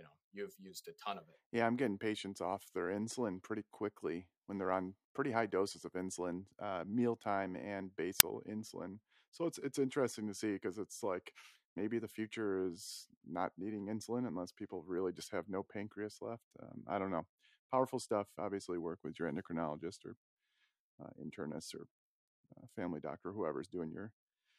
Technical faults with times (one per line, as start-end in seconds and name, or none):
8.20 file tags played as audio